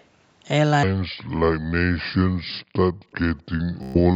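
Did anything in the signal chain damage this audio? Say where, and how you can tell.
Yes. At the call-processing stage, likely an incomplete echo cancellation, a faint copy of the speech returns 378 ms late: about 35 dB down at 0.00–0.04 s and 3.11–3.15 s, about 20 dB down at 3.36–3.58 s.

During playback or editing, a section at the wrong speed runs from 0.83 s to the end at 0.658 times speed. This was likely a clock mismatch, and it drags the speech about seven semitones lower and slower.

The echo canceller gated the background, cutting the microphone by up to about 40 dB. The room sound drops out briefly at 1.08–1.24 s and 2.97–3.06 s.

On the Bluetooth link, a run of lost packets caused a Bluetooth stutter at 3.83–3.98 s. The receiver repeated its last buffer for about 120 ms, producing a buzzy stutter before the speech resumed further along.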